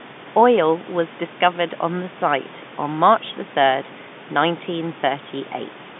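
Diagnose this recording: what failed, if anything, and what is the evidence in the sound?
Nothing failed: the speech sits in the ordinary telephone band of about 150 Hz to 3.6 kHz, with nothing above roughly 3.8 kHz, which is what call microphone processing followed by G.711 mu-law coding at 64 kbps should leave, and no stage from capture to playback shows a fault.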